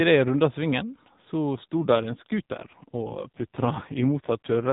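A speech recording over an AMR narrowband mobile codec, its band already capped below 4 kHz, hits an AMR rate drop at 1.56 s, right after "jeg runda svingen så", that lasts to 4.71 s. The voice turns buzzier and more synthetic, which fits a rate cut from 12.2 to 5.9 kbps as the link shifts bits into error protection. Unlike packet loss or a bandwidth switch, nothing drops out and the band stays the same width.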